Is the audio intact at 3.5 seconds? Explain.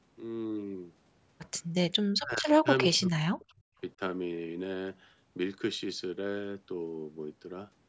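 No. From 2.87 to 3.76 s the speech dips sharply, by roughly 40 dB, most likely speech suppressed in double talk, with the echo canceller muting overlapping talk.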